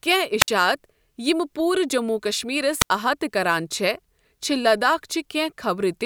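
The radio link from an analogue FM wireless microphone fades twice, and each time the receiver's squelch cuts the output. That is a wireless microphone squelch dropout. At 0.40 to 0.48 s, static swells briefly before the speech falls into near silence for about 57 ms, then returns. The same happens at 2.80 to 2.90 s, where the muted gap is longer, about 80 ms.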